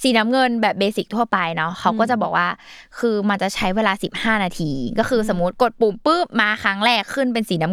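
Clock slip clicks run from 0.11 s to 7.72 s: a single sample is dropped or repeated roughly every 40 ms, likely because two devices' clocks differ by around 500 ppm with nothing syncing them. At about 25 per second, the ticks blur into a faint, steady rattle under the speech.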